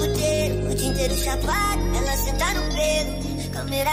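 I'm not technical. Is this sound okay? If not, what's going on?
No. From about 1.80 s right through to the end, a high whistle sits under the sound, quieter than the main audio, with its pitch wandering a little between roughly 5.5 and 5.7 kHz. That's a switching supply whistle: a switching power supply is either running in a burst mode fast enough to hear or beating against another supply, and that buzz leaks into the recording as a thin, steady-ish tone.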